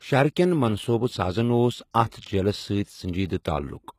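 HE-AAC compression, likely, runs throughout. Nothing reaches above 14.9 kHz, and the treble below that cut sounds copied up from lower bands rather than captured, so s sounds come out gritty and lispy. The plainly audible damage points to a very low bitrate, around 20 kbps.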